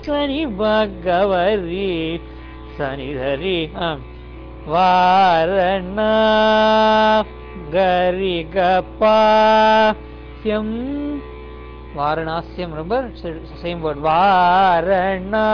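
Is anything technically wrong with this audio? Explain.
No, nothing technically wrong can be heard here.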